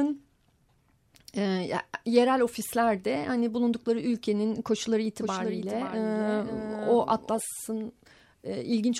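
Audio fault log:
5.22–7.40 s doubled audio track: a dry copy trails half a second behind, about 5 dB quieter, cutting in and out abruptly, likely a second capture path.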